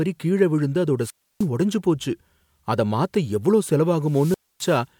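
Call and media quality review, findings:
Wireless mic squelch dropout, 1.00–1.47 s before "உடைஞ்சு போச்சு" and 4.04–4.83 s after "அத மாத்த எவ்ளோ": RF fades, hiss rises, receiver squelch mutes 0.30 s and 0.26 s.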